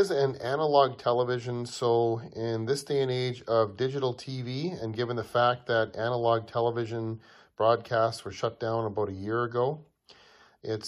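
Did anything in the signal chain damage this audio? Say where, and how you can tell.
No, nothing in the chain audibly damaged this audio.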